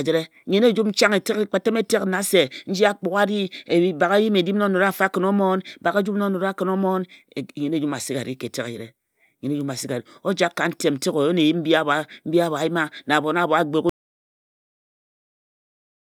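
At 13.89 s the input signal was likely lost, through a disconnected device, a failed link or a stray mute, while recording carried on writing silence. This audio dropout to silence cuts the speech off mid-flow and leaves complete silence, with no room tone, through to the end.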